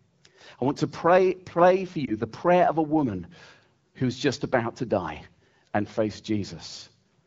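At 2.05 to 2.14 s, lost AMR speech frames: a corrupted wideband frame, fitting a single 20 ms loss, was concealed by repeating prior parameters, producing a brief dip or warble.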